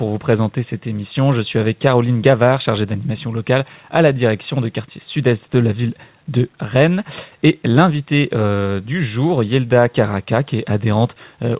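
Nothing technically wrong turns up here; the audio simply carries the narrow sound of a phone-style call path, with nothing above 4 kHz, which fits a 64 kbps G.711 A-law link.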